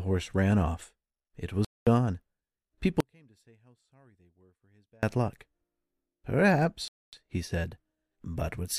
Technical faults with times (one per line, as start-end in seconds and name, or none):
1.65-1.87 Bluetooth stall
3.00-5.03 audio dropout to a faint residue
6.88-7.13 Bluetooth stall